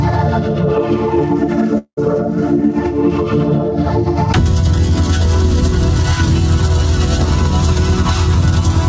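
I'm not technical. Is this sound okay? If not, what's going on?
No. From 1.78 to 1.99 s the sound becomes a brief fading buzz, then goes silent for about 70 ms before resuming with a fifth of a second missing. The likely cause is a long network dropout: audio stopped arriving, so the receiver stretched the last sound to cover the gap.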